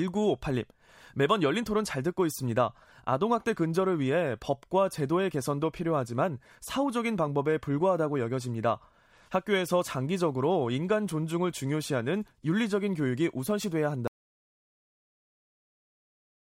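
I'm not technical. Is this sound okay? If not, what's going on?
No. At 14.08 seconds the speech stops dead, and total silence runs to the end of the clip. This is an audio dropout to silence. Even the room sound vanishes. The input was likely lost, for example through a disconnected microphone, while recording continued.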